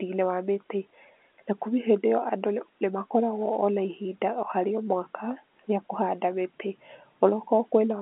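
There are no technical faults to describe in this speech clip, which comes through an ordinary telephone line band with nothing audible above about 3.8 kHz.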